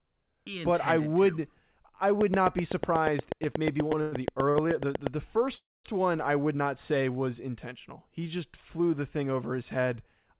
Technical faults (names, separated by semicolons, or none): train of clicks; call audio freeze; short stall from a late packet